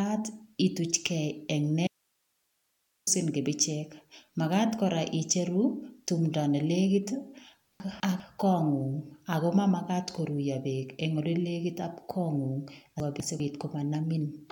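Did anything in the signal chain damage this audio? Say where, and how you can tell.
Yes. An audio dropout to a faint residue runs from 1.87 to 3.07 s. The speech cuts out abruptly for about 1.2 s. Only hiss remains, roughly 45 dB below the speech. The path after the break stayed live, so the wanted signal was likely lost upstream of it.

Chunks out of order appear at 7.8 to 8.2 s and again at 13.0 to 13.4 s. Each time, a 200 ms chunk plays one slot late, after the chunk that should follow it. This is a buffer or network reordering fault. You hear jumbled speech at the hard joins.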